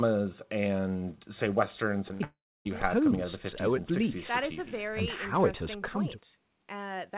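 Right around 2.08 to 2.11 s there's a short concealed packet loss. About 20 ms of speech never made it to the decoder in time, so the receiver stretched the previous sound to cover the hole and blended back in. You hear it as a quick smear or wobble.

Hard on its heels, from 2.13 to 2.22 s, comes a burst of packet loss. Roughly 60 ms went missing in a row. The concealment carries the last sound forward and lets it fade, giving a brief held buzz or hiss before the audio picks up further along.

Then from 2.24 to 2.67 s the sound drops out for over four tenths of a second, which most likely points to a long network dropout. The concealed tail decays and leaves around 300 ms of silence. When the speech returns, about 420 ms of it is simply gone. All of this sits on top of the narrow, telephone-like band you'd expect from G.711, with nothing above 4 kHz.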